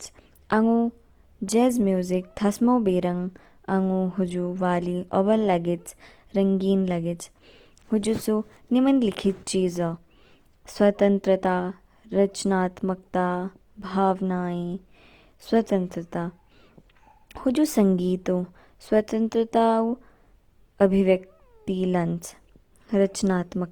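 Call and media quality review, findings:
Speech roughened by Opus compression throughout. Tones sound grainy and noisy, not hollow. Likely cause: Opus encoder in CELT music mode, band energies held and starved bands filled with folded or noise content, consistent with roughly 24 kbps. Full bandwidth retained to 20.2 kHz; less swirl and fewer spectral holes than MP3.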